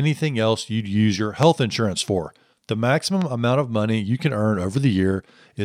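Two loud pops land on this speech. The first hits at 1.43 s, right after "else you'd use your," and it's a big one, roughly 20 dB over the level around it. The second, at 3.22 s just before "amount of money you," is gentler, about 10 dB up. Each is a single sharp thump with the speech carrying on underneath, likely a brief voltage spike from a plug, switch or static getting into the chain.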